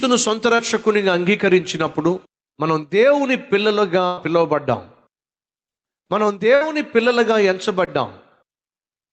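Speech from a call, with packet loss in four places, heard over an Opus-style call codec whose audio tops out around 8 kHz. There are two short concealed packet losses, at 0.55 to 0.61 s and 7.85 to 7.89 s. In each, a few tens of milliseconds never made it, so the receiver carried the previous sound forward (pitch if voiced, shaped noise if not) for about 32 ms and then 19 ms, and blended back. You get a quick smear or wobble there. Then there are two bursts of packet loss, at 4.07 to 4.19 s and 6.55 to 6.63 s. These gaps are longer, and the receiver stretched the last sound out while turning it down, so you hear a held buzz or a fading hiss rather than silence. The first burst is filled for about 105 ms with roughly 100 ms of real audio gone, and the second is filled for about 57 ms with about 60 ms gone. After each one the speech picks up further along, with that stretch simply missing.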